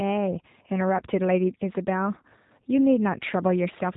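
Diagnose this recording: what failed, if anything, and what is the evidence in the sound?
The failure is at the codec stage: G.729 coding, throughout the speech. Nothing above about 3.8 kHz survives, and the voice sounds plainly rough and synthetic. The speech has been rebuilt from a vocal-tract model and sparse pulses, which fits an 8 kbit/s VoIP link.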